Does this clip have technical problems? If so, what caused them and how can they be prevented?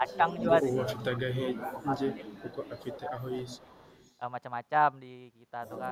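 Yes. The speech is suppressed in double talk at 0.0 to 0.21 s, 0.62 to 3.36 s and 3.63 to 3.78 s. The level dips by about 10 dB in the short spans and by up to about 15 dB in the long one, and roughly a second and a half of that middle stretch is pulled down. The likely cause is an echo canceller that could not separate the near talker from loudspeaker echo while both sides spoke, so it attenuated everything. Tuning the canceller's double-talk detection, or having the loudspeaker side use a headset, prevents this.

There is also echo leak, heard as a delayed copy of the speech trailing by 364 ms. It appears at 0.08 to 0.43 s at about 15 dB below the speech, then faintly at 2.26 to 2.37 s and 3.45 to 4.13 s at about 30 dB below. This is likely residual echo from a loudspeaker at the other end that its canceller failed to fully remove before sending the signal back. Headphones on that side, lower speaker volume, or a better-converged echo canceller would prevent it.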